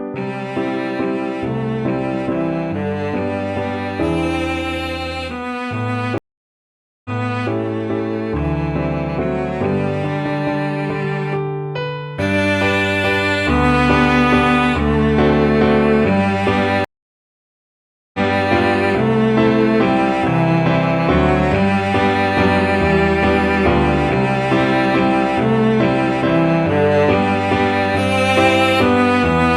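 Stream reconnects at 6.18 s and 16.85 s: the connection dropped, leaving 0.87 s and 1.29 s of silence, then a fresh decoder resumed 0.46 s and 0.33 s earlier, repeating a short stretch of sound.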